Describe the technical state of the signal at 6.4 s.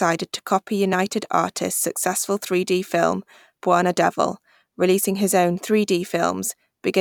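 At 6.4 s the speech signal is intact, with no fault affecting the audio at that point.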